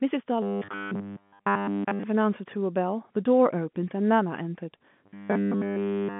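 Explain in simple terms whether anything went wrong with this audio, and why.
Twice the speech turns into robotic sound from repeated short buffers: from 0.42 to 2.03 s, and from 5.06 s to the end. A steady 100 Hz metallic buzz appears, following the voice only roughly. The likely cause is audio arriving too late, so tiny 10 ms pieces are replayed over and over. The narrow phone-line sound is normal.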